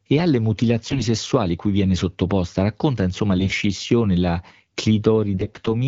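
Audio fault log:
0.87–1.05 s, 3.38–3.58 s and 5.34–5.68 s: AMR bit errors. Roughly a tenth of the weakly protected bits arrive flipped (about 7% in the last run), so excitation pulses and fine pitch, gain and spectral values go wrong. Pitch and level hold, but the speech turns hoarse and gargly rather than dropping out as with packet loss.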